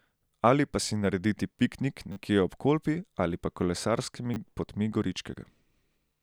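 Short buzzy stutters at 2.12–2.16 s and 4.34–4.36 s are repeated buffers: late audio made the device replay one piece several times, which fits a 10 ms buffer.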